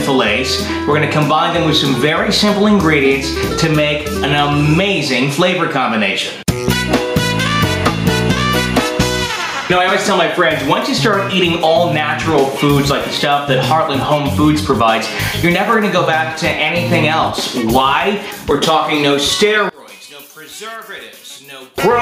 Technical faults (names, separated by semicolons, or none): gain pumping; one channel inverted